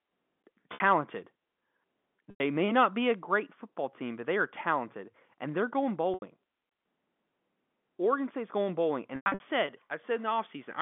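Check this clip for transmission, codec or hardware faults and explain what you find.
There's one fault here, carried over a G.711 line that keeps roughly 200 Hz to 3.5 kHz.

Packet loss with pitch repetition occurs at 0.74, 2.30, 6.14 and 9.16 s. The receiver loops the last pitch period across the 60, 100 and 80 ms gaps, then across a patchier 0.24 s stretch. Each gap sounds like a short, buzzy held tone that fades before the speech picks up again.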